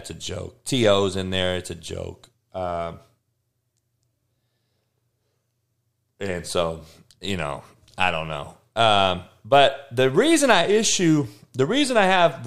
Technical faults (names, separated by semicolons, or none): none